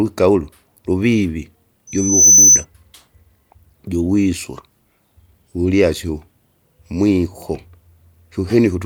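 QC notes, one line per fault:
1.87–2.65 s: loudspeaker feedback squeal. Right after "ulu luvivi" a single tone at 6.1 kHz emerges and swells over roughly 0.4 s into a piercing squeal that ends up about 10 dB above the speech. The microphone is picking up the loudspeaker it drives, and at 6.1 kHz the loop gain exceeds unity, so that frequency reinforces itself on each pass, and the tone stops at 2.65 s.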